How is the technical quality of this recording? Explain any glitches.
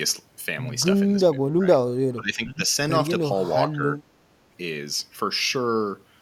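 The recording has three brief dropouts in level. Speech suppressed in double talk occurs at 1.59 to 1.80 s, 2.15 to 2.61 s and 3.72 to 3.80 s. The likely cause is an echo canceller mistaking overlapping far-end talk for echo and turning the talker down. The speech dips by about 15 dB, then about 20 dB at its deepest in the longest stretch, then about 10 dB.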